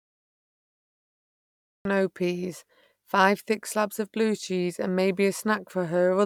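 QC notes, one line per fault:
0.0–1.85 s, cut-off start: digital silence, then the recording begins abruptly mid-sound at 1.85 s before "peas five thick slabs", with no natural attack.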